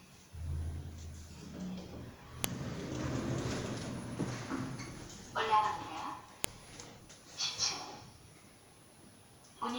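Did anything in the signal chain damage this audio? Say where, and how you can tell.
Yes, at the storage stage: a file header played as audio. Sharp, loud clicks at 2.44 s and 6.44 s, exactly 4.0 s apart, mark where separate WAV pieces were joined without stripping their headers. Those header bytes are being played back as sample values.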